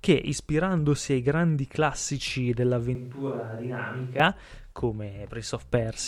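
At 2.95 s the speech abruptly turns roomy and hollow, drops about 5 dB in level and loses its low end, with background noise rising to roughly 35 dB below the speech. It snaps back at 4.20 s. This is a switch to a distant microphone, likely because the close microphone's signal dropped out and a farther pickup took over. On the waveform the envelope steps down and the gaps fill in. A spectrogram shows thinned bass, smeared reverberant tails and a raised noise floor, all with hard edges at both ends.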